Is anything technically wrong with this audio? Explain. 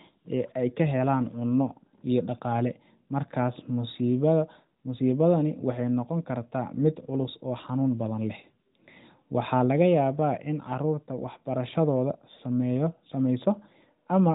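No, nothing is technically wrong with this audio.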